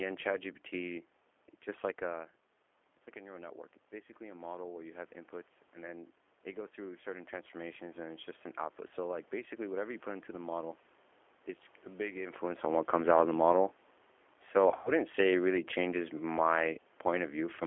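G.729 codec, throughout the clip: the speech is squeezed to 8 kbit/s and rebuilt from a vocal tract filter, a pitch predictor and a few pulses per frame. Nothing passes outside roughly 300 Hz to 3.4 kHz, and the codec's roughness and synthetic edge are plainly audible.

VoIP packet loss concealed by the speech codec, from 14.69 to 14.91 s: about 120 ms of audio went missing across a 160 ms stretch, the longest gap 100 ms. The decoder extended its last pitch and filter at falling gain, so the speech is stretched into a buzzy tone or coloured noise that fades, then sounds weak or distorted as it recovers.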